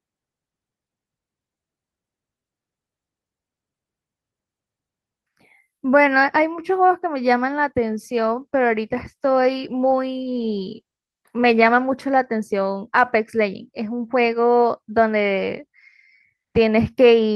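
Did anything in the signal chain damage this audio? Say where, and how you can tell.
Yes. From 7.88 to 12.03 s the speech turns rougher and more smeared than the Opus call path around it. That points to a call bitrate drop in the network stage: the encoder's rate appears to halve from 32 to 16 kbps for about 4.1 s, so each frame is coded more coarsely.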